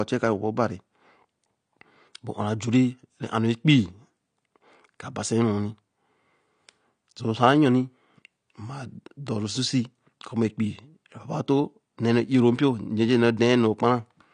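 Speech runs through the whole clip with a dull, smeared quality and a warbling, fizzy edge on sibilants and held sounds, the signature of AAC compression. The likely cause is AAC-LC coding at a low bitrate, which fits roughly 32 kbps. To save bits, the encoder discards everything above 9.8 kHz and thins out the bands below it. On a spectrogram this shows as a hard ceiling at 9.8 kHz, with patchy, gappy energy beneath.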